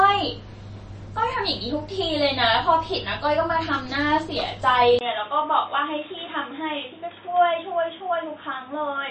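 From start to finish the treble stops dead at 8.3 kHz, and the upper speech band has a watery, swirling shimmer with smeared consonant attacks. That is the signature of MP3 compression, likely at a low bitrate around 32 kbps. A plain low-pass filter would dull the sound without that frame-to-frame warble.

At 4.99 s a 20 ms gap opens, and from there to the end the sound turns boxy and narrow, with nothing above 3.8 kHz. It also drops by about 5 dB and carries a new noise floor roughly 30 dB below the speech. This is an input switched to a poorer device, likely a second microphone or headset profile. The sudden change in tone, level and noise together sets it apart from a gradual filter or gain drift.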